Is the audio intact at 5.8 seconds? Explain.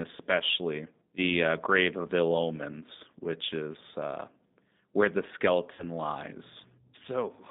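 No. VoIP packet loss concealed by the speech codec affects 5.73 to 5.84 s. Roughly 60 ms of audio went missing, consistent with two lost packets, and the decoder filled the gap by repeating its last pitch and filter at falling gain. The result is a brief buzzy, fading tone, with weakened, smeared sound lingering just after. Underneath, the G.729 codec also runs throughout. Its rough, synthetic texture, band-limited to about 150 Hz to 3.7 kHz, points to 8 kbit/s G.729A.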